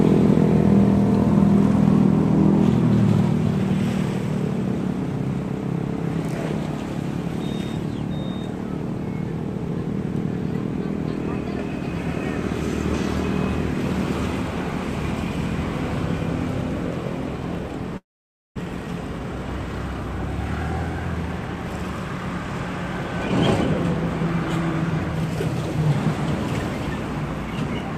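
From 17.97 to 18.58 s the sound drops out into near silence for about half a second, likely a long network dropout; roughly 400 ms never returns. At 18.66 to 19.68 s (109%) and 20.98 to 21.71 s (111%), jitter buffer speed-up trims pitch-period pieces, about 100 ms each time, so the audio hurries at unchanged pitch.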